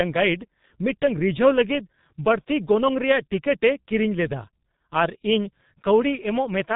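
From start to finish, the speech passes through the G.723.1 codec, and the damage is heavy. Nothing above 4 kHz survives, so the sound is muffled and dull. The codec models the voice in 30 ms frames and updates that model slowly. Voicing turns hoarse. Consonants smear into one another and lose their edges. The dullness fits a very low bitrate, near 6 kbit/s.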